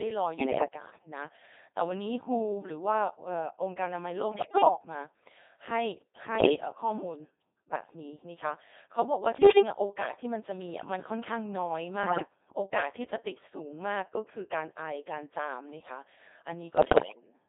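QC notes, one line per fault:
Throughout: Codec 2 vocoder. The whole clip has the buzzy, robotic character of a very low-rate vocoder, consistent with Codec 2 at about 2.4 kbit/s. Only pitch, voicing, level and a coarse spectral envelope get through, and the decoder rebuilds the speech from sine waves, so the original waveform is gone. Damage is heavy, and the sound sits in a narrow radio band from roughly 250 Hz to 3.7 kHz, thin at both ends.
0.38–0.68 s, 4.32–4.68 s, 6.36–6.56 s, 9.38–9.62 s, 12.04–12.28 s and 16.78–17.34 s: bit errors on digital voice radio. In each burst the synthetic speech lurches in pitch, level and tone colour, breaking into warbles, bleeps and garbled robotic noise. Flipped bits corrupt the parameters that define each short vocoder frame. The first burst is milder, with around 5% of bits wrong. The others are rougher, at about 10%. The last and longest, about half a second, runs nearly to the end.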